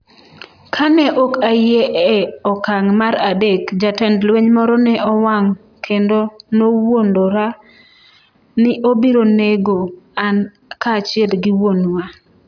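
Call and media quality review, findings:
No faults found in the speech signal; level, continuity and timing are stable throughout.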